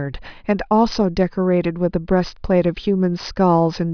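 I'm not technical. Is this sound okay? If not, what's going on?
Yes, this sound is okay, and nothing is going on that needs fixing.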